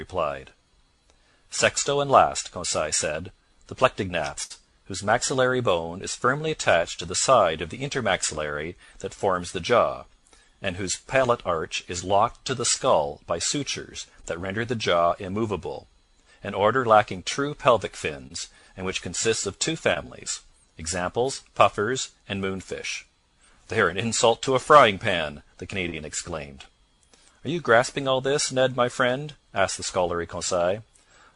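At 4.43 s comes a burst of packet loss lasting until 4.52 s. About 60 ms of audio never arrived. The receiver stretched the last sound for roughly 66 ms, letting it fade. Playback then jumps ahead, with that stretch of audio gone.

Short concealed packet loss follows at 12.74, 14.22, 18.27, 19.94, 25.90 and 26.62 s. Each time, about 20 ms went missing. The decoder bridged each hole for 17 to 23 ms and blended back in. Each one is a brief smear or wobble.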